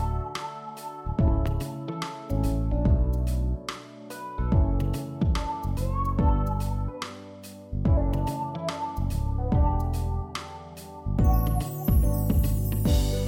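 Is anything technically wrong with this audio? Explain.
Yes. From 1.28 to 1.48 s there is a loud pop, heard as two sharp pops in quick succession, peaking roughly 10 dB above the surrounding sound, which continues underneath. The likely cause is a sudden voltage step, from a switch, plug or static discharge, entering the signal path.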